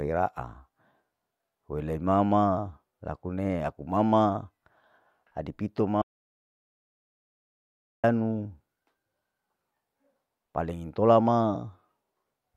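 After "adi pito", an audio dropout to silence runs from 6.02 to 8.04 s, likely a lost input. Unlike gating, not even room tone remains.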